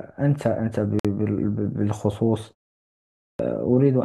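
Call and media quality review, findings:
Gap at a join of encoded pieces, 0.99–1.05 s: 53 ms silence inside continuous speech; separately encoded segments joined untrimmed. Waveform shows flat dropout, spectrogram a vertical blank band with smeared edges.

Clipped start after a pause, 2.96–3.39 s: about 430 ms of onset lost after a 0.5 s pause; output device waking or relocking. Waveform jumps abruptly from silence into speech, with no onset on the spectrogram.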